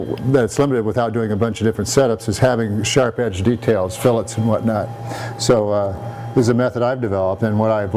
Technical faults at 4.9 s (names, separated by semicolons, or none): none